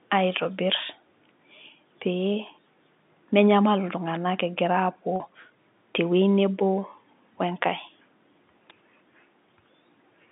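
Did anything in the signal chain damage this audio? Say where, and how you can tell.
Yes. At 4.15 s and again at 8.70 s a sharp, very short snap sits on top of the speech, each lasting under 20 milliseconds and unrelated to the sound around it. These electrical switching spikes belong to the analogue wiring stage. The likely cause is a nearby switch, motor or static discharge arcing briefly, with the audio line picking up that burst as a click superimposed on the signal.

At 5.16 s the speech briefly holds and turns slightly buzzy for about 40 ms, ending around 5.20 s before the voice carries on. This is packet loss with pitch repetition, a network-stage fault. A gap that size fits two lost packets of 20 ms each. The receiver filled the hole by repeating the last pitch period, producing the brief sustained, buzzy quality, and the gap was too short to fade to silence. The narrow telephone band around it comes from the G.711 line coding.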